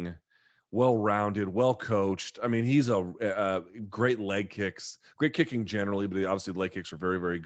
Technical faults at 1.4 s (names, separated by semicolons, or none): none